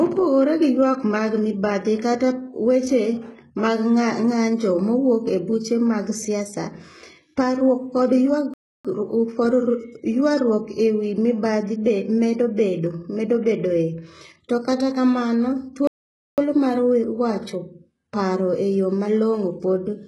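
Throughout the speech, the treble is gritty and metallic, pointing to heavy HE-AAC compression at a very low bitrate, around 12 kbps. The upper band is likely synthesised from copied lower bands, so sibilants turn lispy and harmonics mismatch.

At 8.54 s the audio cuts to silence for 0.31 s, then at 15.87 s for 0.50 s, resuming each time. These are playback stalls, likely the player starving for data or its thread blocking, abruptly interrupting the flow of speech.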